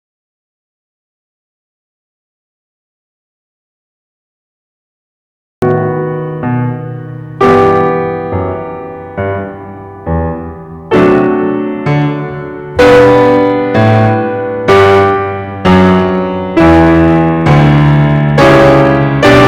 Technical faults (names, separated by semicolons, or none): hard clipping; audio dropout to silence